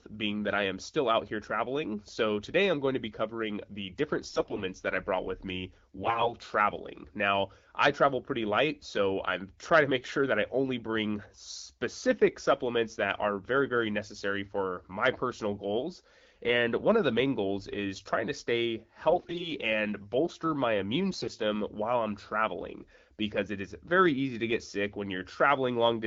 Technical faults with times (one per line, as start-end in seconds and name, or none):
4.29-4.63 AMR bit errors
6.00-6.34 AMR bit errors
19.10-19.49 AMR bit errors
21.12-21.30 AMR bit errors